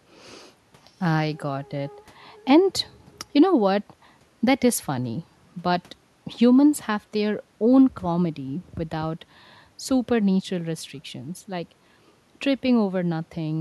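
No technical faults can be heard in this speech recording. There is nothing to place at any point along its timeline.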